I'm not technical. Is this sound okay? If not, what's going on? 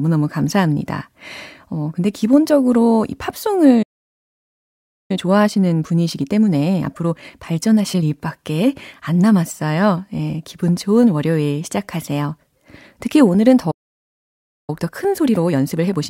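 No. Twice, the player most likely ran short of incoming audio, or got held up internally, and simply stopped producing sound until it recovered. This is a playback stall. You hear the speech cut out mid-flow into silence, first from 3.82 to 5.11 seconds (about 1.3 seconds), then from 13.71 to 14.70 seconds (about 1 second), before it picks up again.

After each gap the player tries to make up the lost time by trimming tiny slices out of the audio and blending the joins, a time-compressed catch-up. The speech keeps its normal pitch but sounds rushed. From 5.11 to 8.11 seconds it runs at 1.25 times normal speed, and from 14.70 seconds to the end at 1.15 times.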